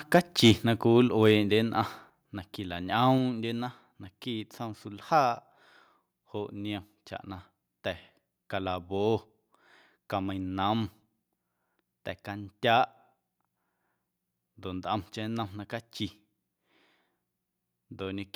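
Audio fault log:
0.15–0.17 s and 0.44–0.51 s, microphone overload: The loudest moments take on a harsh, crackly edge, with peaks pushing about 3 dB and then about 4 dB past the converter's limit. The likely cause is input gain set too high, so the converter cuts the tops off the waveform. On a waveform display those peaks show flattened tops, with roughly 7 percent of samples clipped. A spectrogram shows brief vertical smears of broadband energy at those instants.
1.08 s and 2.1 s, microphone volume stepped down: The level falls abruptly, first by about 5 dB and then by about 4 dB, and the background noise drops along with the foreground. That matches a likely automatic gain control in the call software reacting to the earlier overloads by lowering the microphone input in discrete steps. The waveform envelope shows a sudden step to smaller amplitude at each time, and the spectrogram dims evenly across all frequencies at once rather than fading gradually.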